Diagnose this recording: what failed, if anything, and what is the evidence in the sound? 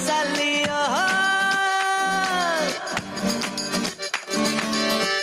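Gain pumping runs throughout: the gain swings by around 10 dB under loud sounds, likely from excessive input gain driving a fast limiter.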